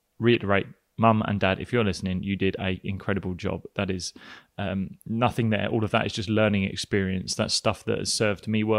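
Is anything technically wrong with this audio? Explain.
Yes. A corrupt frame decoded at 0.33–0.36 s: a single damaged compressed frame was played with flipped bits, misplacing energy in frequency and producing a brief, fairly loud glitch in the speech.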